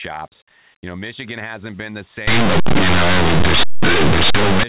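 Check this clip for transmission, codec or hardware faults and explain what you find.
One fault is present. From 2.27 s, right after "hasn't been the", to 4.63 s, the speech turns into very loud, harsh distortion. This is linear audio read as companded: plain linear 8-bit samples were expanded as if they were mu-law codes. Small values on one side of zero map to the largest outputs while their mirror values stay tiny, so the waveform becomes violent clipping-like noise.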